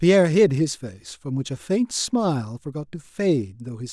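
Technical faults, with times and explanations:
No technical faults can be heard anywhere in the speech recording. Nothing calls for a time or an explanation.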